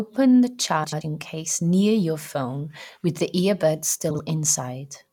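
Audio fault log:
0.84–1.02 s and 4.10–4.20 s, frames out of order: in each stretch two neighbouring blocks of frames, about 85 ms each in the first and 43 ms in the second, play swapped. The speech flutters, garbled, and no time is lost.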